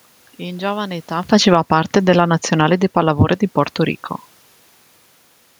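Just after "giovane età", at 1.22 s, the automatic gain falling begins. The gain control judged the input too loud, or its background noise too strong. It lowers the level by about 7 dB until 3.18 s. Speech and room noise sink together. This follows the talker's natural shift near 1 s.

From 1.64 s to 2.46 s, the automatic gain rising overlaps it. The control now judges the input too quiet. It lifts the gain by about 4 dB. Speech and background swell together, briefly countering the downward drift.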